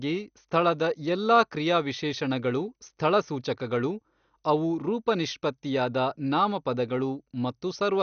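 MP2 compression damage runs through the whole recording. The speech is dull, with nothing above 6.5 kHz, and carries a plainly audible gurgling, granular roughness. This is likely MPEG Layer II coding at a rate starved of bits, around 48 kbps by the sound of it. The encoder divides the signal into 32 sub-bands and drops the upper ones entirely, while other bands flicker on and off and those it keeps are coarsely quantised.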